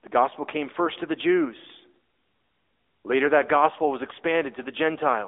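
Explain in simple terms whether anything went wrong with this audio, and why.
AMR narrowband mobile codec, throughout the clip: the speech went through a mobile-phone codec that rebuilds the voice from a simple model of the throat and mouth. Only about 250 Hz to 3.6 kHz survives, nothing above 3.8 kHz, so it sounds thin, muffled and noticeably buzzy.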